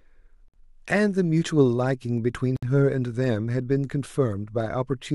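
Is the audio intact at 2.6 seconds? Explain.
No. From 2.57 to 2.63 s the speech drops into a 61 ms silence, a gap at a join of encoded pieces. Separately encoded segments were butted together untrimmed, leaving encoder delay and final-frame padding, so sound stops abruptly with smeared edges and then resumes exactly where it left off.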